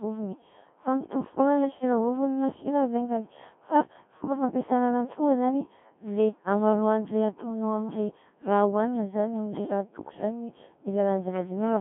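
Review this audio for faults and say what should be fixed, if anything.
Codec 2 vocoder artefacts run throughout. The speech is robotic and buzzy, rebuilt from sine waves within 150 Hz to 3.4 kHz, at about 1.3 kbit/s. Send speech through a waveform codec at a higher bitrate instead.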